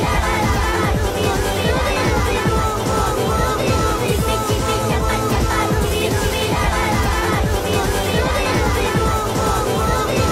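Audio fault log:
Throughout, doubled audio track: a second full-band copy of everything runs about two seconds behind the original at roughly the same loudness, so each sound comes back intact a beat later and overlaps whatever follows it. There's no decay or room colour on the repeat, which is why it reads as a clean duplicate rather than an echo. Likely cause is the signal being captured twice, once through a slower path, or an edit that left two copies out of step.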